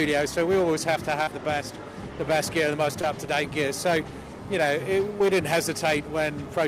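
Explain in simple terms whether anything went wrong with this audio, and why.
Short concealed packet loss hits at 1.23 to 1.28 s, 3.01 to 3.04 s and 5.19 to 5.21 s. Small pieces of audio, 30 ms, then 10 ms twice, arrived too late. The player patched each gap by continuing the sound just before it, leaving brief smears or wobbles.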